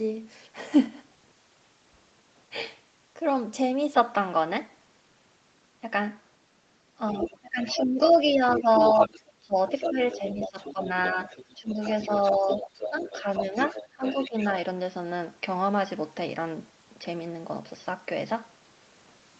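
A speech recording whose sound changes character at 3.94 s and stays that way to the end. From that point the band narrows, below the 8 kHz reach of the call path it travels through. The level shifts by roughly 5 dB. A new noise floor appears about 40 dB under the speech. There is no gap at the change. This is an input switched to a poorer device, likely a fallback microphone or a headset's call profile with a narrower band. From 7.07 s to 14.47 s a second voice sits behind the main talker, around 10 dB down. That is the other side's voice leaking through, likely loudspeaker playback that the echo canceller did not fully remove from the microphone. In the same stretch the main talker is pushed down in two places. Between 7.13 s and 11.78 s the voice dips in pieces adding up to about one and a half seconds, at worst by roughly 20 dB. Between 12.32 s and 14.36 s it dips again, less deeply, by about 10 dB over roughly 0.7 s in total. 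This is speech suppressed in double talk. Both sides were speaking at once. The echo canceller likely could not tell the talker from the echo, so it turned everything down.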